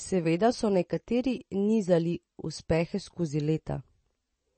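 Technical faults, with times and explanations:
Throughout, MP3 compression: nothing above 8.3 kHz and plainly audible codec damage, likely from a bitrate near 32 kbps forcing treble cut-off and zeroed weak frequency lines.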